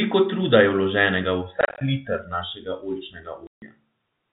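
From 1.61 to 1.81 s and 3.47 to 3.62 s, packet loss filled with silence leaves hard-edged gaps, visible as blank vertical strips that fit 10 ms packets.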